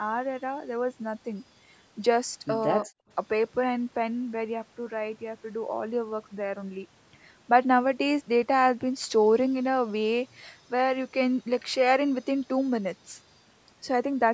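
From 2.86 to 3.09 s the room tone behind the speech suddenly thins out and almost vanishes, sinking by about 40 dB for roughly a fifth of a second before snapping back. This is background gated by the echo canceller: while the far-end loudspeaker was active, the canceller clamped the microphone hard to keep echo out and took the ambient sound with it. The call's microphone processing stops everything above 8 kHz.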